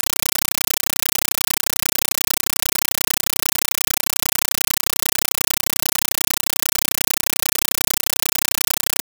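Throughout, harsh, very loud chattering static replaces the sound, in 8 ms noise bursts 31.25 times a second: a compressed stream played as audio, AC-3 data never decoded.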